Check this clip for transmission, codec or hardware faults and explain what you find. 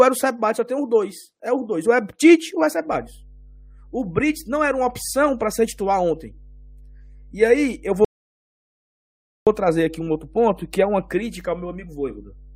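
Two faults are audible in the speech.

Mains hum starts at 2.92 s, just after "ou é", and runs to the end. Power-line current is leaking into the signal path, likely through a ground loop, adding a steady 50 Hz tone roughly 25 dB below the speech. Unlike a fluctuating buzz or background noise, its pitch and level never change.

A rebuffering stall runs from 8.05 s to 9.47 s. The player ran out of buffered audio and paused until more arrived. The result is 1.42 s of silence, after which the speech resumes exactly where it stopped. Unlike a dropout, no audio is missing, and the clip is simply longer.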